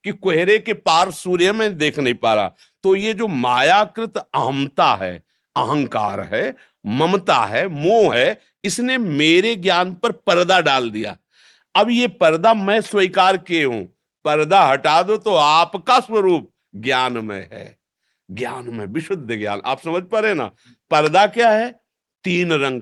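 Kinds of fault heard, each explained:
No faults can be heard anywhere in the recording, and the signal stays steady and intact for its whole duration.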